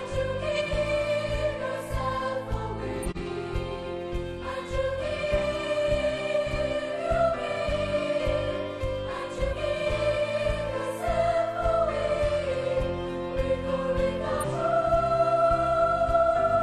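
At 0.56 to 0.61 s a corrupt frame was decoded, one damaged frame played anyway: a brief glitch near about -25 dBFS, a stray off-frequency smear on the spectrogram.

Compressed frames were skipped at 3.02 to 3.21 s, 9.43 to 9.54 s and 14.40 to 14.45 s, jumping ahead roughly 150, 100 and 200 ms; each join is an audible jump where the skipped audio is missing.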